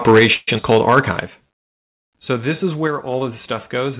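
A short speech recording carried over a narrowband call path, with nothing above 4 kHz, which fits G.711 mu-law at 64 kbps, shows several overlapping faults. From 0.07 to 1.0 s there is microphone overload. The loudest syllables carry a harsh, crackling edge because their peaks are flattened at the converter's ceiling, about 7 dB over full scale, with a few percent of samples cut. This is distortion that stays locked to the loudness of each syllable. It does not drop out or change the timing of the speech. The likely cause is an input volume set too high. The microphone volume stepped down three times: by about 4 dB at 0.19 s, about 7 dB at 1.27 s, and about 3 dB at 2.87 s, just after "this is". Each is a sudden drop in speech and background together, and the lower level then holds. A fade would be gradual, and a codec fault would not move the noise floor in step with the speech. These drops are likely automatic gain control pulling the device level down. 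A call audio freeze runs from 0.34 to 0.49 s. The last sound is stretched into a fading buzz or hiss over about 133 ms, ending in roughly 10 ms of silence, and then the speech resumes exactly where it stopped. Nothing is lost. A gap has likely been inserted while the receiver waited for delayed packets. A skip ahead follows between 0.57 and 0.74 s, where roughly 70 ms of speech vanishes. The two sides are joined with only a 9 ms bridge, so the audio lurches forward. Unlike the freeze, there is no held sound here, only missing material. From 1.42 to 2.33 s, ending just before "this is", a jitter buffer slow-down repeats single pitch periods to rebuild its reserve. It adds 71 ms and plays at 93% speed. The speech sounds drawn out while the pitch stays put, which separates this from tape-style slowing, where the pitch would drop along with the speed.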